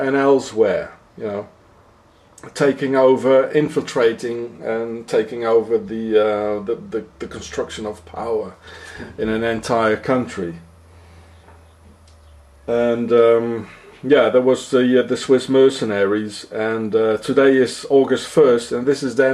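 No dropouts, clicks, distortion or level jumps are audible anywhere in the recording.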